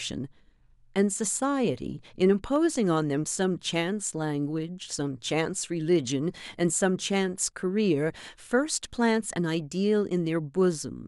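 At 2.56 s and again at 5.77 s, the speech carries a single sharp click. Each is likely dropped samples, with a handful missing. The waveform jumps straight to a later value. About a tenth of a millisecond goes, too brief to remove any sound.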